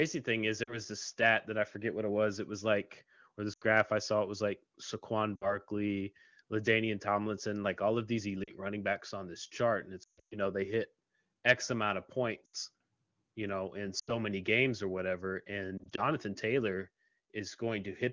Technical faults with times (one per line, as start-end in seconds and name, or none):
0.63-0.80 lost AMR speech frames
3.53-3.63 lost AMR speech frames
5.36-5.57 lost AMR speech frames
8.43-8.52 lost AMR speech frames
10.03-10.38 lost AMR speech frames
12.45-12.55 lost AMR speech frames
13.99-14.12 lost AMR speech frames
15.78-16.06 lost AMR speech frames